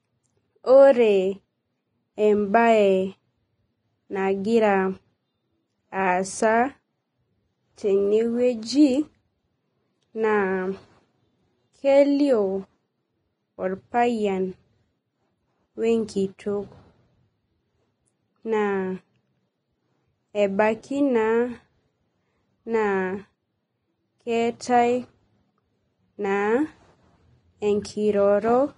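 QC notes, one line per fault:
Throughout, Vorbis compression. The speech sounds hissy and grainy, with roughened tones and softened consonant onsets. Nothing is heard above 10.6 kHz. The likely cause is lossy coding at a low setting. The codec keeps a smooth outline of the spectrum and spends too few bits on the detail above it. Fine treble detail then turns into noise of similar energy. The damage is plainly audible and points to a bitrate near 24 kbps.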